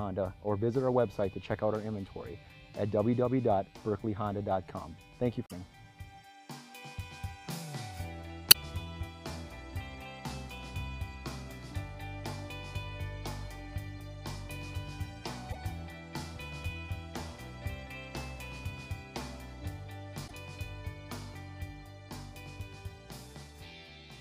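Four short glitches from damaged data in a compressed stream break into the audio, at about 5.45, 8.48, 15.49 and 20.24 s, each lasting roughly 70 ms and heard as a brief chirp, squawk, click or short hole. Some bytes in the encoded file or stream were lost or overwritten there, so the decoder misreads those frames, loses sync and hunts for the next valid frame header before the sound resumes.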